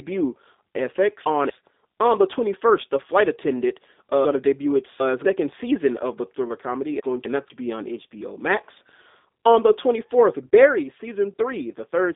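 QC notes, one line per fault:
throughout G.729 codec: the speech is thin, boxy and telephone-like, with plainly audible roughness and a faintly synthetic quality. There is no content above 3.8 kHz, and the lows are rolled off below about 250 Hz. The coder does not keep the waveform. It models each 10 ms frame as a vocal-tract filter excited by a pitch predictor and a few pulses, which fits an 8 kbit/s G.729A link.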